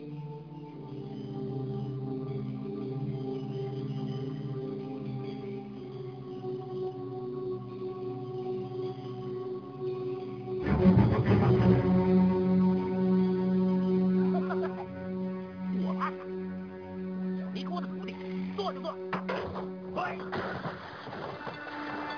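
No fault is audible anywhere in the clip.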